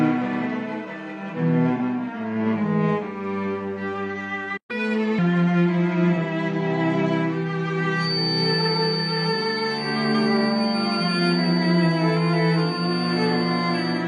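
At 1.76 s the audio has a brief AAC frame loss with concealment: about 43 ms, which fits a single lost frame, turns smeared and noisy rather than silent, because the decoder rebuilt it from the previous spectrum. At 4.57 s a playback stall cuts the sound to silence for 120 ms, likely a player starved of data. From 4.71 to 5.19 s a catch-up at higher speed follows, with the backlog played at 1.25 times speed so that tempo and pitch rise together, about four semitones, before settling back. From 7.95 s to the end a feedback whistle sits at 4.6 kHz, roughly 10 dB below the main sound. It is likely a speaker-to-microphone loop held just short of runaway, and its slow swelling and fading in level sets it apart from a rock-steady electrical whine.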